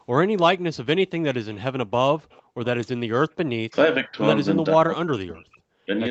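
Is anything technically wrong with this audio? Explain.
Yes. Three kinds of fault are audible.

Echo leak: at 1.53 s and again from 2.19 to 2.43 s, a faint, delayed copy of the speech trails behind, roughly 30 dB under it and 456 ms late. The likely cause is the far side's loudspeaker feeding its microphone while its echo canceller failed to remove all of it.

Background gated by the echo canceller: from 2.44 to 2.57 s, the room tone suddenly sinks, by about 38 dB at its deepest, for roughly a tenth of a second, then returns. The canceller clamped the microphone hard while the loudspeaker was playing and released it afterwards.

Speech suppressed in double talk: the speech dips or cuts out at 3.61 to 3.74 s, 4.04 to 4.17 s, 4.72 to 5.66 s and 5.85 to 5.92 s. The deeper drops reach around 40 dB and the shallower ones around 20 dB, with the longest lasting about a second. Likely, both sides spoke together and the canceller attenuated everything.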